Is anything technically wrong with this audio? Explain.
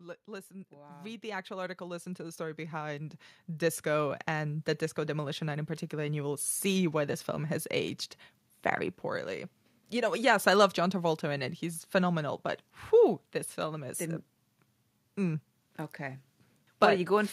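Yes. From 0.25 to 7.28 s there is automatic gain rising. The gain control judged the input too quiet and lifted its gain slowly, by about 18 dB. Voice and background swell together, levelling off just before "has aged very poorly".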